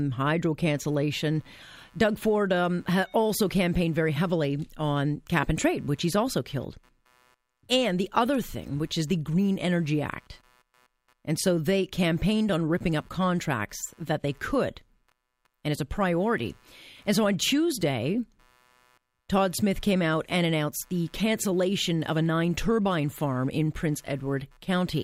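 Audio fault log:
0.65–25.04 s, computer activity noise: a faint buzzing chirp pulsing at roughly 150 times a second, about 40 dB under the speech, as the computer's load changes shift the shared audio ground. On a spectrogram it shows as thin, evenly spaced lines near multiples of 150 Hz. On the waveform it appears as a low fizzy floor in the gaps.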